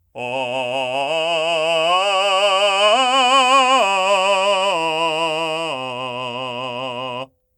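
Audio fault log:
No faults are heard in this music clip. There is nothing to log.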